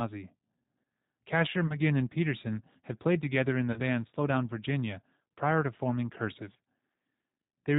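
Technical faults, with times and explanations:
Throughout: G.729 codec. The speech is rebuilt from a vocal tract filter, pitch predictor and sparse pulses, which fits roughly 8 kbit/s and gives a rough, slightly synthetic tone. A spectrogram shows nothing above 4 kHz and smeared, grainy harmonics.
1.67–1.76 s and 3.72–3.81 s: VoIP packet loss concealed by the speech codec. About 20 ms and then 40 ms went missing, the second just after "played together in the", which fits one and two lost packets. The decoder stretched its last pitch and filter into a fading buzzy tone or coloured noise, and the speech stays weak until it recovers. On a waveform, the envelope sags smoothly, with repetitive periodic cycles. On a spectrogram, the harmonics are frozen and steady rather than following the speech.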